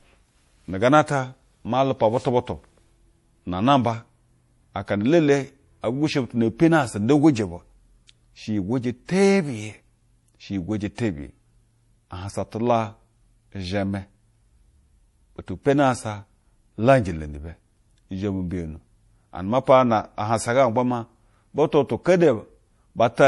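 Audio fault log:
Throughout, MP3 compression: the speech was most likely squeezed through an MP3 encoder starved of bits, at a rate that fits roughly 48 kbps. With too few bits to go round, the encoder drops everything above 11.4 kHz, so the top end stops dead and sibilants lose their air. Quiet spectral detail flickers in and out between frames, giving the voice a plainly audible watery, swirling texture, with chirpy s sounds and softened consonant attacks.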